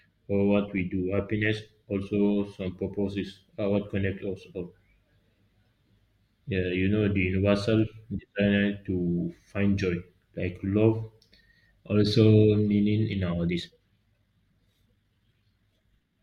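From 13.45 s to the end, there's a time-stretched section: the pace suddenly jumps to about 1.73 times normal while the pitch stays put. It sounds rushed, likely from software squeezing that stretch to fit by dropping short slices.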